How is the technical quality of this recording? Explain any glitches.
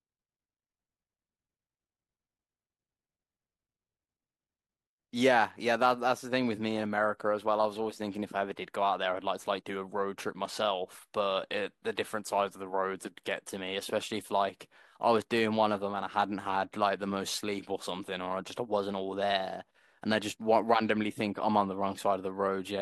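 Listening to the recording, nothing stood out as a technical problem anywhere in the speech.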